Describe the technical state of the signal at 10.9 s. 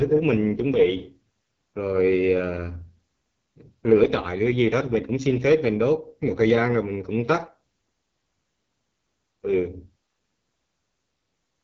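At 10.9 s, as throughout the clip, the speech runs through the AMR wideband (HD Voice) codec at its lowest mode, likely 6.6 kbit/s, so it sounds rough and raspy, with nothing above 7.5 kHz.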